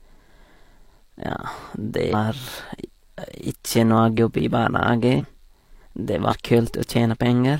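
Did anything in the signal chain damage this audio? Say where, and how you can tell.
Yes. Periodic USB or driver dropouts hit the driver stage. Ticks recur every 1.02 s from 0.30 to 6.96 s. Each skips under a millisecond of audio.

Compressed frames skipped at the codec. Jumps occur at 2.09, 4.14, 5.16 and 6.27 s. The sound jumps ahead several 46.4 ms frames each time.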